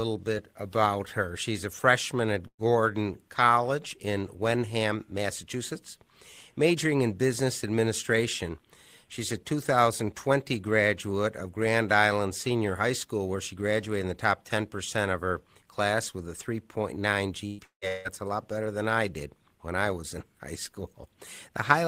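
At 2.47 to 2.62 s there is a burst of packet loss. About 120 ms of speech never arrived, and the receiver filled the hole by stretching the last sound and fading it out for roughly 110 ms, with a brief near-silence of about 70 ms inside it. The speech then resumes slightly further on. The second burst, at 17.47 to 17.61 s, behaves the same way but is filled across its whole length, about 120 ms missing and around 118 ms concealed, with no silent stretch. What marks both as bursts is their brevity.

Immediately after, from 17.64 to 17.85 s and again from 17.88 to 18.08 s, the sound breaks up twice more, each time losing about 180 ms. The first of these decays through roughly 170 ms of fading concealment into about 110 ms of near-silence. The second is covered by a similar 170 ms fade throughout. Only about 30 ms of real audio separates these gaps from each other and from the burst before them. 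Each gap is longer than the bursts, and in the first the concealment runs out, so this cluster is likely a long network dropout rather than isolated packet loss.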